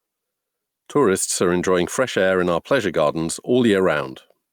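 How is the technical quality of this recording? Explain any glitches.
The main problem is gain pumping, and it runs through the whole clip. The level ducks by around 5 dB whenever the speech gets loud, so the level keeps breathing. The likely cause is input gain set far too hot, with a fast limiter clamping down on each loud syllable. That flattens the dynamics and leaves the speech sounding squashed.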